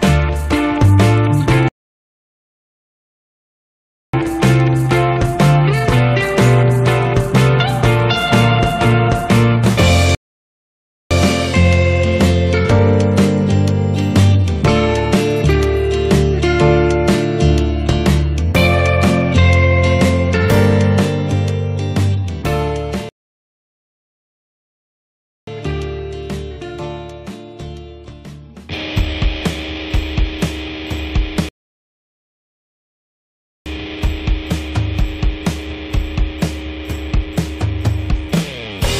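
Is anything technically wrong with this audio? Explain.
Yes. There are rebuffering stalls at 1.68–4.13 s, 10.15–11.11 s, 23.09–25.47 s and 31.49–33.66 s. Each time, playback used up its downloaded audio and stopped until more data arrived. The sound drops to silence and then picks up exactly where it left off, so nothing is skipped. The gaps add about 2.45 s, 0.96 s, 2.38 s and 2.17 s of dead air, which lengthens the clip by roughly 8 s in total.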